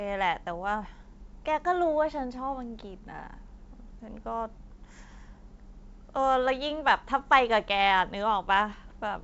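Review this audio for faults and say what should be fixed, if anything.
No faults found; nothing here needs fixing.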